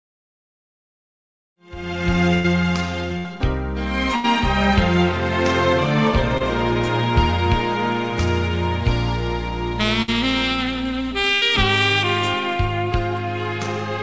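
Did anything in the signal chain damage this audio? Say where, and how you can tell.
Yes. Brief smears at 1.54 s and 6.38 s are short concealed packet loss in the network: about 20 ms arrived too late, so the decoder continued the preceding sound.

Held buzzes or fading hiss at 2.34, 3.18, 4.16, 10.02 and 11.34 s are bursts of packet loss. The concealment decayed, then the audio resumed with 60 to 100 ms missing.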